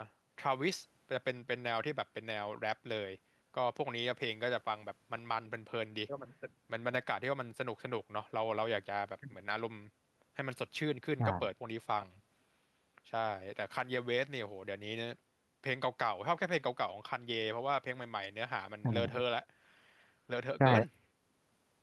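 No technical fault can be heard anywhere in this speech recording. Nothing breaks in or disturbs the audio at any point along its length.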